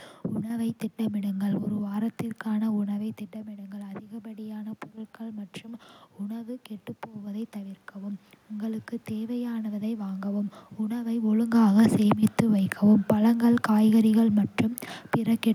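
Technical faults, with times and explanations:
3.31–10.33 s, automatic gain rising: just after 3 s the talker drops away from the mic by about 12 dB. The AGC slowly winds its gain up by about 10 dB over seven seconds, so the voice creeps back and the room noise swells right along with it.
11.32–14.44 s, automatic gain falling: around 11 s the talker moves again. The AGC pulls its gain back by about 3 dB over roughly three seconds, so the voice sinks in level, background sinking with it.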